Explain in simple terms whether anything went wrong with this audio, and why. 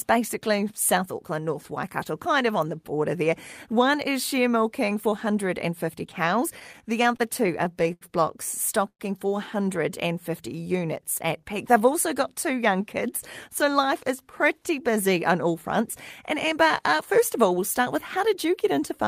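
Between 6.59 and 8.03 s the speech shows repeated stalls (stutter): ten brief hold-ups, the longest 81 ms, where late network packets left the receiver repeating sound. Nothing is lost.

At 8.89–9.01 s a call audio freeze inserts a gap of about 0.1 s, mostly silent. It was likely caused by packets delayed in transit.

From 9.90 to 12.13 s, just before "got two young kids", a jitter buffer slow-down stretches the speech to 94% speed, adding 150 ms to rebuild its reserve.

Jitter buffer speed-up occurs twice: at 13.93–15.82 s, after "two young kids so", at 104% speed, and at 17.13–19.05 s, after "uh uh", at 105%. Each trims roughly a tenth of a second, so the second one sounds slightly hurried.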